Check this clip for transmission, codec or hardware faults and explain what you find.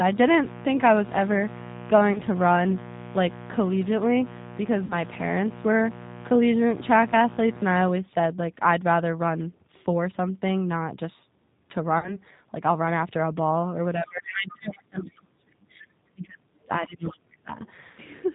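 Yes, there are several faults: a low-bitrate speech codec across the whole clip, three concealed packet losses, two stretches where the talker is suppressed during double talk, and a brief leak of the far-end voice.

Throughout, the G.729 codec is plainly audible. Its 8 kbit/s analysis-by-synthesis coding, built on a vocal tract filter plus a few pulses per subframe, leaves the speech rough and faintly synthetic. A spectrogram shows nothing above 4 kHz, and the harmonics look smeared.

VoIP packet loss concealed by the speech codec occurs at 2.13–2.20 s (20 ms lost), 4.86–4.94 s and 11.99–12.17 s (40 ms each). The decoder repeats its last pitch and filter at falling gain, so the sound is briefly stretched and then fades. On a spectrogram this appears as flat, repeated harmonic stripes, followed by a weak recovery.

Speech suppressed in double talk occurs from 14.02 to 15.64 s and from 16.14 to 17.5 s. 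The likely cause is the echo canceller attenuating the near talker while the far side speaks. The voice dips by up to about 35 dB and about 30 dB respectively, sounding dull and broken. The waveform envelope collapses in chunks, and the high band thins out on a spectrogram.

The other side's voice leaking through can be heard at 15.02–15.15 s. This is likely residual loudspeaker echo that the canceller failed to remove. It is a faint scrap about 30 dB below the talker, visible on a spectrogram as a weak, separate harmonic trace inside the suppressed region.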